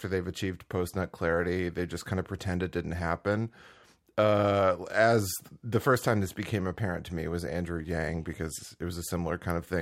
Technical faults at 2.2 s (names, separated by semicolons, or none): none